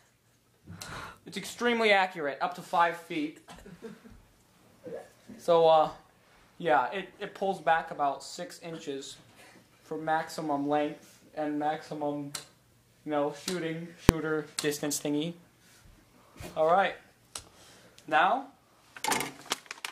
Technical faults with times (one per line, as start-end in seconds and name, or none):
14.09 invalid numbers at full scale